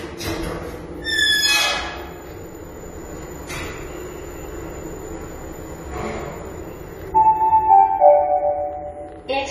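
A recording of everyday sounds, and the whole thing carries AAC compression damage from start to finish, and it's plainly audible. Nothing gets through above 14 kHz, so the top end feels shaved off and dull, and transients come out a bit smeared, with a fizzy, warbly texture riding on anything sustained. The likely cause is an AAC-LC encode at a low bitrate, which fits something around 32 kbps, where the encoder drops the cut-off and thins out the spectrum to save bits.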